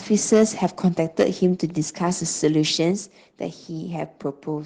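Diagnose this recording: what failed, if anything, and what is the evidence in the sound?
Microphone overload, likely from input gain set too high at the converter: from 0.32 to 0.66 s the speech peaks run about 4 dB past full scale, flattening a few percent of samples into harsh crackle.

Microphone volume stepped down, likely by the call processing's gain control: at 2.91 s speech and background both drop abruptly by about 4 dB in a single step.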